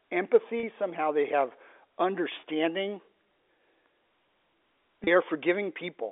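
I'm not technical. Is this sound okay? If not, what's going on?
No. At 0.60, 2.40 and 5.04 s the sound briefly holds a buzzy tone for 30 ms. This is packet loss with pitch repetition: lost data gets patched by repeating the previous sound.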